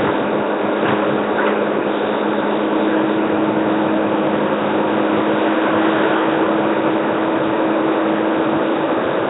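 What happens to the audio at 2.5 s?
At 2.5 s you're hearing what's present through the whole clip: a rough, hissy halo with a smeared, underwater feel and nothing above 3.9 kHz. That's likely Nellymoser compression, the old Flash mic codec, starving weak bands of bits and filling them with noise, consistent with roughly 16 kbps.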